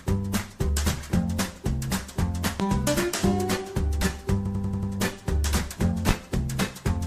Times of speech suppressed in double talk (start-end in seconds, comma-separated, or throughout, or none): none